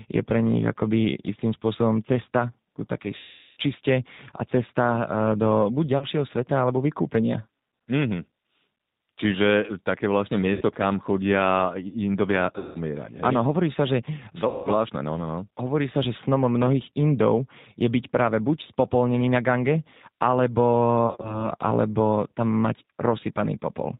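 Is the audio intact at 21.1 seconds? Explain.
No. The whole clip passes through the G.729 codec. At 8 kbit/s it cuts everything above 4 kHz and rebuilds speech from a simple model, so it sounds rough and synthetic.

From 21.07 to 21.49 s there is VoIP packet loss concealed by the speech codec. About 90 ms went missing across 160 ms, with gaps up to 40 ms. The decoder stretches and fades the last sound into a buzzy tone or coloured noise, and recovery stays weak.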